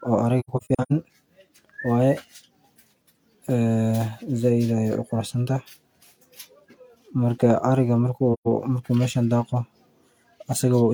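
AAC frame loss with muting breaks up this speech clip from 0.40 to 0.92 s and again from 8.33 to 8.48 s. In the first stretch, brief dropouts totalling about 0.3 s are scattered over half a second, the longest about a tenth of a second; the second is a single gap of about 128 ms. The decoder zeroes each missing frame's spectrum, so the overlapping windows fade the sound out and back in, leaving soft-edged holes.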